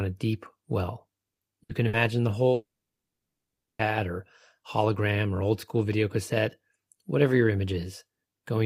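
Right after "a deep well", at 1.33 s, a burst of packet loss hits. Two more follow at 1.63 s and 1.87 s. Each gap lasts about 90 ms. Packets went missing or arrived too late to play. The receiver stretched the last sound and faded it, so each gap becomes a brief held buzz or hiss. The sound then resumes further on. About 60 ms of the original is gone each time.

From 2.53 s to 3.82 s comes a much longer break, likely a long network dropout. The last sound is held and fades for roughly a tenth of a second. About 1.15 s of silence follows. Nothing is recovered from this stretch. The audio returns with "or hologram or old", missing well over a second of the original.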